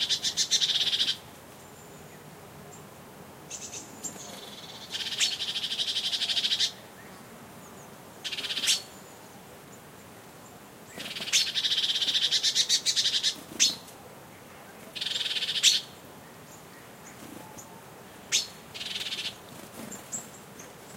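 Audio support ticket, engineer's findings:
No faults found in this clip.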